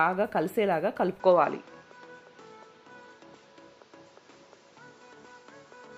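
At 1.2 s the input likely switched to a poorer device, which stays in use to the end. Nothing now reaches above 7.6 kHz, so the sound dulls abruptly, with no gap. The level shifts by around 5 dB and a faint new background noise appears.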